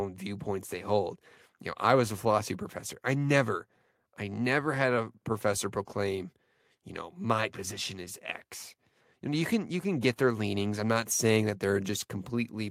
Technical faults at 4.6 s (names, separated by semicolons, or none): none